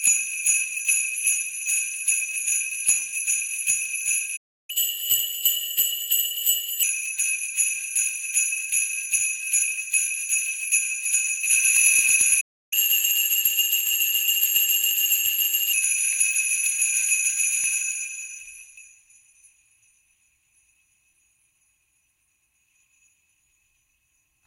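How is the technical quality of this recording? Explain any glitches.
The recording has two playback interruptions, each followed by a stretch of sped-up audio.

Playback stall: at 4.36 s and again at 12.40 s the sound cuts out mid-flow for about 0.32 s and 0.31 s, then resumes where it stopped. The output likely went silent because the player ran short of buffered data or its thread was blocked. On a waveform each stall is a flat line. On a spectrogram it is a vertical blank band with hard edges.

Catch-up at higher speed: after each stall the player works through its backlog by resampling faster. From 4.70 to 6.83 s the audio runs at 1.15 times normal speed, raising the pitch by roughly two semitones. From 12.73 to 15.73 s it runs at 1.1 times, about one and a half semitones higher. Both then drop back to normal. On a spectrogram, harmonics and other features shift upward and events sit closer together, then step back down.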